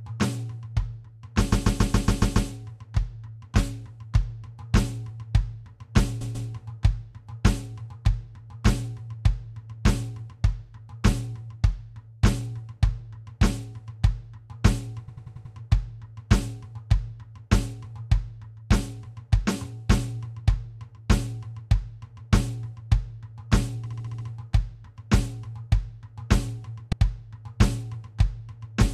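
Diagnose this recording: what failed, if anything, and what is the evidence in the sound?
The music stutters from repeated frames at the codec or storage stage. A block of compressed audio replays: 139.3 ms at 1.51–2.49 s and 6.20–6.48 s, 92.9 ms at 15.07–15.54 s and 26.91–27.01 s, and 69.7 ms at 23.85–24.27 s. Each repeat lengthens the audio.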